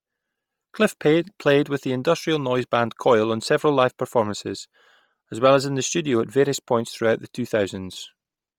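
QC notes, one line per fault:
Throughout, Bluetooth LC3 compression, likely: the speech has a breathy, grainy edge because the upper spectrum is discarded and refilled with noise. On a spectrogram the highs look smeared and patchy in 10 ms blocks. The heavy damage fits about 32 kbps.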